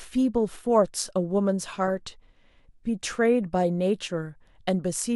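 At 1.87 to 1.90 s, a corrupt frame was decoded: flipped bits in a couple of compressed frames were played rather than concealed, so misread gains and codes put energy at wrong frequencies, heard as a brief chirpy blip peaking around -25 dBFS.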